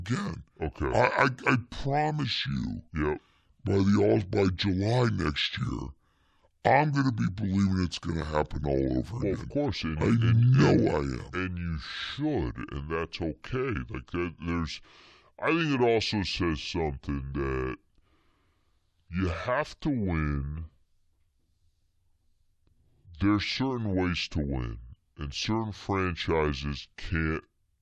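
This is a speech clip with a wrong sample rate fault that lasts for its whole length. The voice sounds low and slow. Everything runs at about two-thirds of its proper speed, and pitch drops by about 7 semitones, a little over a fifth. Speed and pitch shift together by the same ratio, which fits audio recorded at 48 kHz being played back at 32 kHz with no conversion between them.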